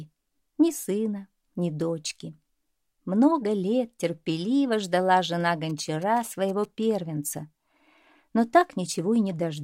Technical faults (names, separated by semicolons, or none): GSM signalling bursts